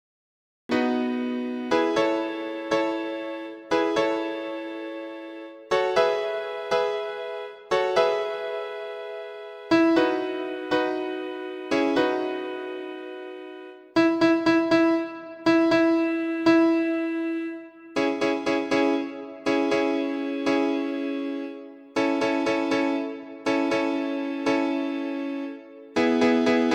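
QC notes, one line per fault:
0.00 to 0.69 s, cut-off start: capture or the stream came up late, so nothing was recorded from the source until 0.69 s, and the clip holds pure digital silence up to that point. At 0.69 s the audio switches on abruptly partway through a sound already in progress, with no natural onset or fade-in. The ear hears the sound jump in mid-way rather than building up from its beginning.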